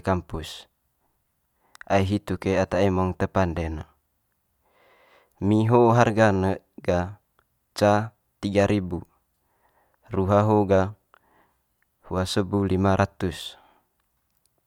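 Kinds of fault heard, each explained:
No faults turn up anywhere in this stretch of speech, so there's nothing to list here.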